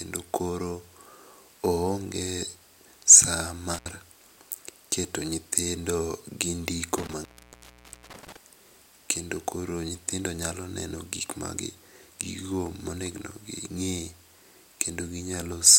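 A loose connection in the signal path opens twice, an intermittent contact that drops the speech with crackle at each edge and faint hiss underneath: briefly from 3.74 to 3.89 s, with the line open for 70 ms, then from 6.98 to 8.37 s, open for 860 ms.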